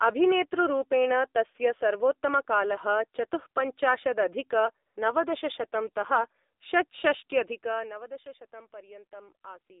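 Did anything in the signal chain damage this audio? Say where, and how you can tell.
Yes. At the codec stage, the whole clip carries AMR narrowband mobile codec damage. The speech is confined to a line band of roughly 300 Hz to 3.7 kHz, with nothing above, and it has a plainly audible buzzy, synthetic quality, which fits AMR-NB at a low rate of around 7.4 kbps. On a spectrogram, energy stops sharply near 3.7 kHz and thins below 300 Hz. Harmonics look smeared and blocky, because the vocal-tract model is driven by only a few pulses per subframe.

In the call processing, there is AMR comfort noise from 4.86 to 4.96 s. For about 100 ms the phone treated the talker as silent and stopped sending speech frames. The receiver then substituted generated noise, so the real signal is replaced by a smooth, steady hiss that cuts in and out abruptly. The waveform shows a short flat band of even noise with hard edges. 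On the spectrogram the texture there is uniform and featureless rather than speech-shaped.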